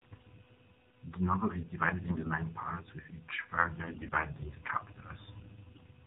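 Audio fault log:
Throughout: AMR narrowband mobile codec. This speech has nothing above 4 kHz, and the low rate, which fits 7.4 kbps, leaves it plainly buzzy and synthetic.
2.08–2.32 s, 3.84–4.28 s, 5.74–5.82 s: AMR bit errors. Flipped low-priority bits misplace the excitation pulses. The voice keeps pitch and level but turns hoarse and gargly, after "novel is divided" and "parts with each".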